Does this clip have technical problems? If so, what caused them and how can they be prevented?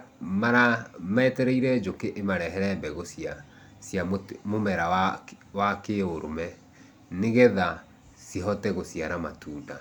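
No, there are no technical problems to report here.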